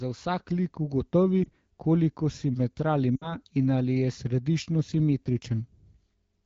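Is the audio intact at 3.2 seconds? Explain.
No. Between 3.16 and 3.37 s, lost AMR speech frames fail their checksum over about 60 ms, fitting three 20 ms frames. The wideband decoder repeats the last good pitch and vocal tract settings with falling gain, so the speech drops to near silence within two frames.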